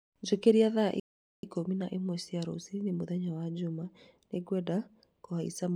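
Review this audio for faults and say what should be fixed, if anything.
At 1.00 s the speech stops dead and stays silent until 1.43 s, about 434 ms, then resumes with "ikũmi na ĩmwe cia". This is a playback stall, likely the player running dry of buffered data or its thread being blocked. Prevent it with deeper buffering and a non-blocking audio thread.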